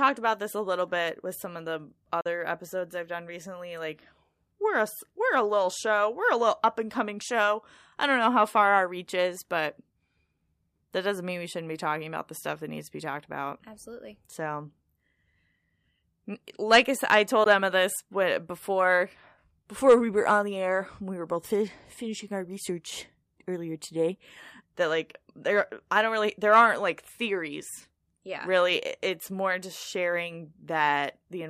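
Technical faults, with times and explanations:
2.21–2.26 s and 17.44–17.46 s: Bluetooth dropout. Speech cuts to silence after "with some of the" and after "like I said I". It resumes further along, as if it had kept playing, skipping about 44 ms and 15 ms. Late wireless packets were likely dropped, which fits three lost packets, then one.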